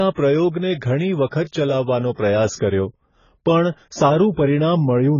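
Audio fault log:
throughout: AAC compression. Heavy codec damage dulls the speech, with nothing above 7 kHz. Sibilants sound fizzy and smeared, and sustained sounds warble. This fits AAC-LC at about 16 kbps, a likely cause. At that rate the coder drops high bands and leaves spectral holes.
1.26 to 1.32 s, 2.13 to 2.18 s, 2.56 to 2.59 s: pre-echo. A short hiss comes before each attack, spread over 54, 51 and 38 ms. The attack lands late in a transform block. Noise sized for the loud part then leaks into the quiet gap before it. Each onset sounds softened.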